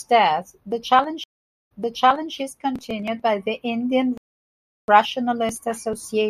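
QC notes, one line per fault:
1.24–2.35 s, stream reconnect: the speech cuts to about 0.47 s of silence, then resumes roughly 0.65 s earlier, repeating a stretch already heard. The connection dropped, the player reconnected, and a fresh decoder picked up mid-stream from a resent burst of earlier data.
4.18–4.88 s, playback stall: the speech stops mid-flow and the output stays silent for about 0.71 s before sound returns. This is likely the player running out of buffered data, or its playback thread being blocked, until it recovered.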